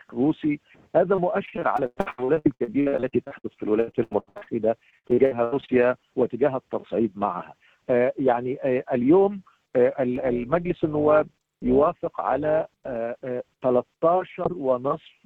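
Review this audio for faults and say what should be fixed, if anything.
Choppy, robotic sound runs from 1.15 to 4.57 s and again from 4.9 to 5.7 s. This is repeated packet loss. The first stretch has about thirty short gaps, the longest 104 ms. The second has nine, the longest 78 ms. Each hole is patched by extending the preceding sound, so over a third of each stretch is this stand-in audio, and the repeats give it a buzzy, mechanical edge. A larger jitter buffer, with forward error correction or redundant packets on the link, would keep these gaps from opening.

From 10.16 to 12.97 s the sound takes on a metallic buzz, a fast level ripple of about 6 dB. This is overlap-add ripple. The audio was split into windowed frames and rejoined with an overlap whose windows do not sum to a flat gain, so the level dips and swells once per frame, at around 200 Hz, which the ear hears as a metallic buzz with extra tones around each note. 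Choosing a window and hop size that meet the constant-overlap-add condition, or renormalising by the summed window, would remove it.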